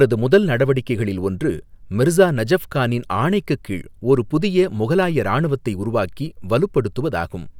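No faults are audible anywhere in the speech, with nothing in the signal path breaking down at any point.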